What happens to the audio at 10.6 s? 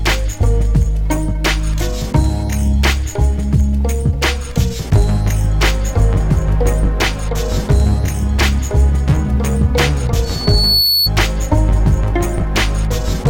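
A loudspeaker feedback squeal, 10.24 to 11.10 s: a microphone re-amplifies its loudspeaker, so a 4.4 kHz tone swells within a second, unlike a steady whistle.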